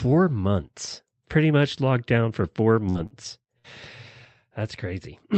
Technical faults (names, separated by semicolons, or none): burst of packet loss; short stall from a late packet